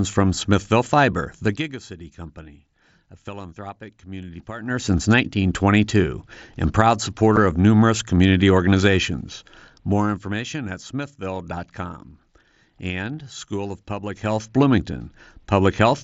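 From 1.42 to 1.8 s, just before "company a philanthropic community", a fast ticking, zipping texture rides on the speech as its level falls by about 20 dB. This is zipper noise. The gain drops in 1 dB steps, roughly fifty per second, with no smoothing between them. Each sudden step puts a small discontinuity into the waveform, and the quick run of those tiny clicks is heard as the zip.

At 7.36 s, between "and proud" and "of numerous community organizations", a very brief hole opens in the speech with hard edges. The gap lasts 7.5 ms, which points to a single lost packet on the headset's wideband mSBC link. This is unconcealed Bluetooth headset packet loss. Nothing was interpolated across the missing audio, so the sound simply cuts out and snaps back abruptly.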